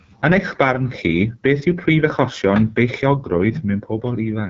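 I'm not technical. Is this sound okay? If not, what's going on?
No. Throughout, the speech has passed through the AMR wideband (HD Voice) codec at a low setting, leaving it rough and raspy, with nothing above about 7.7 kHz.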